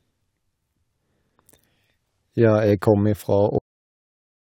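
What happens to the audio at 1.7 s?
Nothing goes wrong at 1.7 s: the speech runs through that moment intact, with no dropout, click, distortion or other fault.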